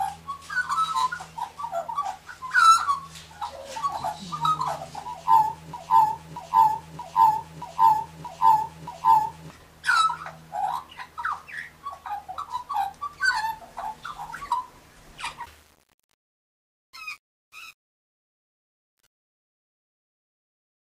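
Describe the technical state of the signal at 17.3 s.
At 17.3 s the signal is inside a stretch of truncation distortion on a fade, running from 15.44 s to the end at 20.88 s. The fade is requantised to 8 bits without dither, so the fading waveform collapses into coarse steps and sounds gritty. Unlike codec artefacts, this grit follows the level of the fade rather than the spectral content.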